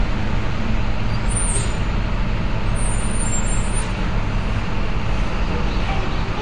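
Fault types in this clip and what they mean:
AAC compression: a low-bitrate AAC-LC encode, likely around 32 kbps, discarded high-frequency detail, leaving the sound plainly dull and smeared, with nothing above 9.6 kHz.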